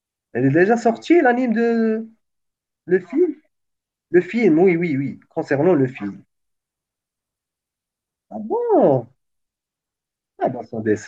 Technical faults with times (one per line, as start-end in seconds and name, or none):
none